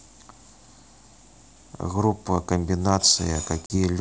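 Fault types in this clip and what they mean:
Packet loss on an ADPCM call, 3.66 s: about two packets (40 ms) become a hard-edged silence, knocking the decoder's predictor and step size out of step.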